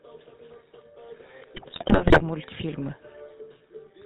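Throughout, the speech carries the coarse, buzzy texture of the GSM full-rate codec, with plainly audible damage that fits a 13 kbps stream. The coder reduces the voice to a vocal-tract filter excited by a sparse, regularly spaced pulse train, so the fine detail of the voice is replaced by a gravelly roughness. Nothing above 4 kHz survives, which leaves the sound dull and boxy.

From 1.54 to 2.22 s, GSM bit errors break up the signal. Corrupted bits reached the decoder, which then used wrong filter, pitch and gain parameters for many consecutive frames. The result is squawks, pops and gargling distortion, with the spectrum lurching and the level jumping from one 20 ms frame to the next. The density of the damage fits a bit error rate of around 4 percent on a weak radio link.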